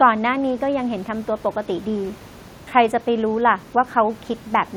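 Nothing stood out on listening to this speech, apart from the faint room noise sitting about 26 dB below the voice, which belongs to the recording itself.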